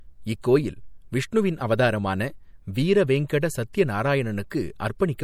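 MP3 compression runs through the whole of this speech clip as a plainly audible watery, swirling texture. It fits a 64 kbps encode, and the likely cause is that the encoder, short of bits, drops weak frequency lines in and out from frame to frame. Pre-echo appears at 3.28 s, 3.73 s and 4.50 s. A short hiss leads each sharp attack, by 15 ms at the first and 12 ms at the others, because the codec spreads its quantisation noise across a whole block and so fills the quiet moment before the onset and softens it.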